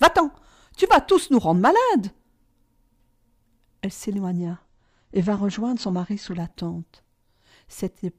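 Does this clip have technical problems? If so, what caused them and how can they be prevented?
Yes. An adaptive stream at a lower bitrate plays from 4.38 to 6.38 s. With no gap, everything above 8.1 kHz suddenly vanishes and codec artefacts thicken. That fits a slowed connection forcing the player from a 96 kbit/s rendition down to one of around 24 kbit/s, then back. A larger playback buffer, a steadier connection, or a floor on the lowest bitrate the player may select would prevent it.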